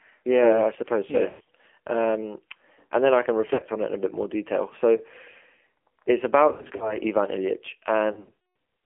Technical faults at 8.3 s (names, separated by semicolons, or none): AMR narrowband mobile codec; lost AMR speech frames